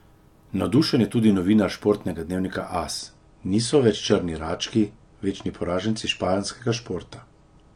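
At 2.99 s the adaptive stream switches to a lower bitrate and stays there to the end of the clip, the kind of step down a player makes when the connection slows. The speech's treble is suddenly cut off, with nothing above 9.8 kHz, and the coding gets coarser, so the top end turns dull, with more audible codec artefacts. The change is abrupt with no gap, which fits a drop from about 96 to 32 kbit/s AAC.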